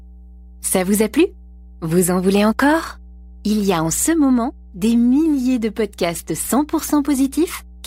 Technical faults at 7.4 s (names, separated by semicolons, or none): mains hum